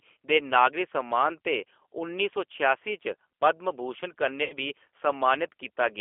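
The whole clip has G.729 codec damage, and it's plainly audible. The speech is squeezed into a telephone band of roughly 300 Hz to 3.4 kHz, and it's been rebuilt from a filter, a pitch estimate and a few pulses, which fits an 8 kbit/s G.729A stream. That leaves it intelligible but rough and a bit synthetic.

From 4.44 to 4.54 s there's VoIP packet loss concealed by the speech codec. About 60 ms of audio went missing, and the decoder filled the gap by stretching its last pitch and filter into a fading buzzy tone or coloured noise. The sound then stays weak and smeared for a moment while the decoder recovers.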